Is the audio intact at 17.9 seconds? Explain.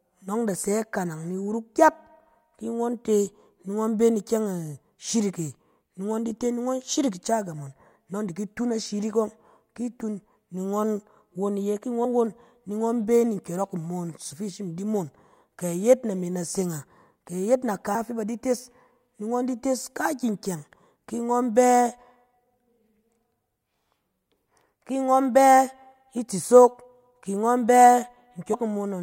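No. Compressed frames are skipped at 17.94 s, before "fɛ ba di tes". The sound jumps ahead about a tenth of a second, fitting roughly five lost 24 ms frames.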